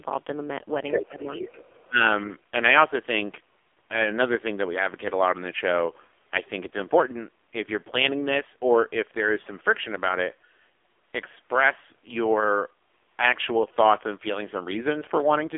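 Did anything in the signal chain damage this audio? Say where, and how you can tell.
Yes. At the codec stage, the AMR narrowband mobile codec runs throughout. The spectrogram stops dead near 3.6 kHz, and the heavily buzzy, synthetic texture fits a very low bitrate, around 5.9 kbps.

In call processing, the other side's voice leaks through from 1.34 to 1.87 s. A faint second voice sits about 15 dB under the talker, showing as overlapping harmonic stripes, likely residual echo left by the canceller.

Speech is suppressed in double talk from 1.73 to 2.01 s. The waveform envelope dips by roughly 20 dB over about 200 ms, likely because the echo canceller ducked the talker alongside the echo.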